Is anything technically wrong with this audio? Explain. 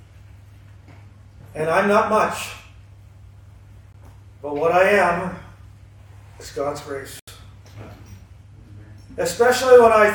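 Yes. The sound drops briefly to silence twice, at 3.93 s for 18 ms and from 7.19 to 7.28 s for about 81 ms, then resumes. These gaps are likely Bluetooth stalls: interference delayed packets, the headphones' buffer emptied, and playback paused until resent audio arrived.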